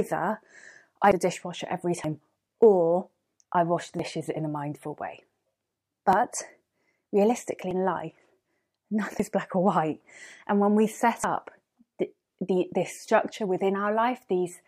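Abrupt forward jumps in the speech land at 1.12, 2.04, 3.99, 6.13, 7.71, 9.20 and 11.24 s, each skipping roughly a tenth to a third of a second. This is likely a dropped buffer (overrun), with unread samples overwritten and the remaining audio spliced together.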